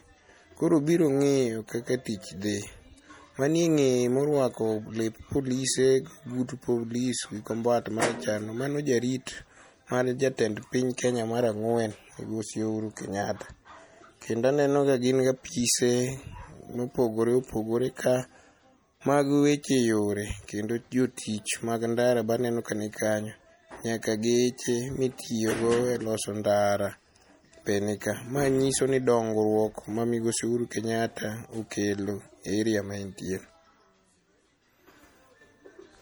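Throughout the speech, plainly audible codec damage is heard, likely from MP3 compression at a low bitrate around 48 kbps. Bits are starved, so weak spectral detail is dropped, though content still reaches about 21 kHz. Pre-echo appears at 10.97 s and again at 21.17 s. The transform spreads quantisation noise across its block, so a brief hiss, 14 ms and 10 ms long respectively, precedes each sharp onset.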